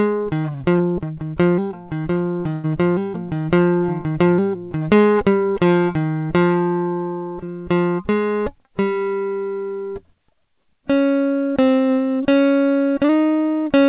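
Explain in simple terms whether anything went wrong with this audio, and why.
Something did go wrong, in two different ways, while this music travelled over a call connection. That connection also limits everything to below 4 kHz, so the top end sounds dull throughout.

Short concealed packet loss happens twice, at about 0.78 to 0.82 s and again at about 7.46 to 7.50 s. Each time, roughly 20 ms of the music never arrived in time. The receiver covered the hole by briefly stretching the sound it had just played, then blended back in. You hear only a brief smear or wobble, and the music keeps flowing.

A burst of packet loss hits at about 2.53 to 2.66 s. Here about 100 ms went missing in one go, far too long to hide neatly. The receiver kept continuing the last sound while turning it down, so you get a held buzz or fading hiss instead of silence. The music then picks up further along, with that stretch skipped. 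That length and the audible jump are what set it apart from the brief smears.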